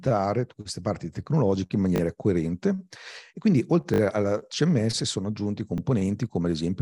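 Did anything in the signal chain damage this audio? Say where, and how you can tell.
Yes. At the driver or buffer stage, fresh audio missed its deadline, so the device replayed its last buffer: a repeated buffer. After "queste parti tecnologiche in", at 1.96–2.00 s, one slice sounds three times. After "coerente e quindi", at 3.94–4.00 s, it sounds four times. After "sono aggiunti", at 5.78–5.80 s, it sounds twice. Each repeat lasts 20 ms, which fits a 20 ms buffer. The hard joins give a brief buzzy stutter, with no speech skipped.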